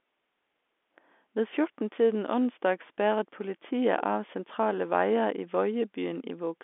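No faults are present anywhere in this speech.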